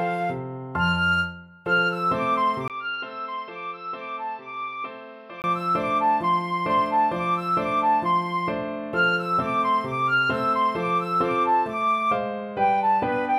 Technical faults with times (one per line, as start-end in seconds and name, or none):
2.68-5.44 input switched to a poorer device